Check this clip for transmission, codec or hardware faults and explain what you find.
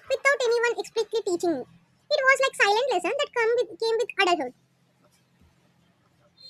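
One fault runs through the whole speech clip: a wrong sample rate. Throughout, playback runs 1.38 times fast with pitch raised about 5.55 semitones, which fits audio recorded at 32 kHz but played at 44.1 kHz. The voice sounds high and hurried. A spectrogram shows harmonics and formants shifted upward, and the waveform appears compressed in time.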